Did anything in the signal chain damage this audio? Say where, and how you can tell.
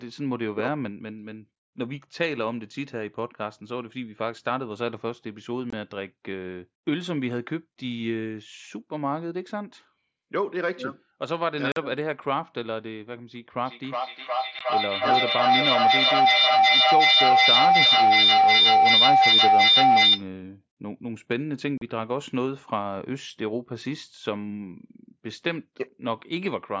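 Yes. Unconcealed Bluetooth headset packet loss at 5.70–5.73 s, 11.72–11.77 s, 14.59 s and 21.78–21.82 s: abrupt 15–45 ms holes where headset-to-phone packets vanished unreplaced.

Feedback howl from 13.62 to 20.3 s: a tone near 700 Hz swells to about 10 dB above the speech, its loop repeating roughly every 400 ms, as two call devices share one room.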